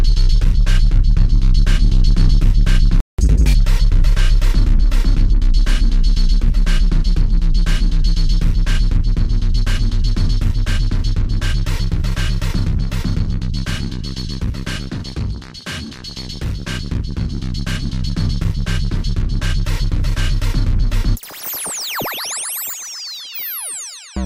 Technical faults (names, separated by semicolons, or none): playback stall; catch-up at higher speed